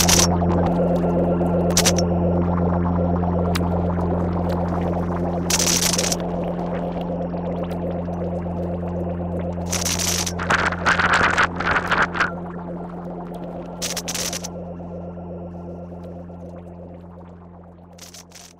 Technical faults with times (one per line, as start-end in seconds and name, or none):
3.74-4.87 train of clicks